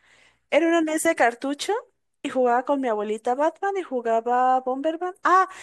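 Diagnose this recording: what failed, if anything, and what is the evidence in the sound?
Listening closely to the speech, nothing stood out that would point to a failure at any stage of the chain.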